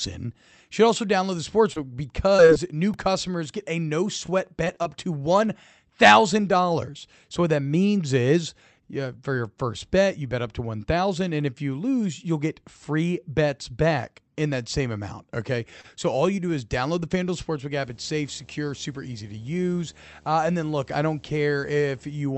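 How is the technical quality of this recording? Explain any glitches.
The recording has several transmission glitches and one interference problem, all heard through a call-codec path whose Opus coding limits the top end to about 8 kHz.

Repeated packet loss (robotic sound), 1.73–2.58 s and 4.26–4.87 s (after "get a no"): several short gaps of up to 25 ms are patched by extending the previous sound. The result is choppy. Unlike a single stall, audio is actually missing.

Repeated buffer, at 2.94 s: a 1.33 ms chunk, which fits a 64-sample buffer, played three extra times. It gives a tiny click-buzz rather than an audible stutter, because the repeated piece is so short.

Jitter buffer slow-down, 15.70–16.51 s, before "is download the": repeated pitch periods add 39 ms, so the speech runs at 96% speed with unchanged pitch. Sounds are drawn out and nothing is lost.

Short stall from a late packet, 15.81–15.86 s: the buffer ran dry and one sound is held 27 ms before resuming where it left off. 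It is a single brief hold with a slight buzz or dip, not a repeating pattern.

Video or display buzz, 17.77–22.22 s: a screen or video cable couples into the audio, producing a steady 75 Hz buzz with hash above it at about 30 dB below the speech. Unlike mains hum, it follows the display's refresh rate.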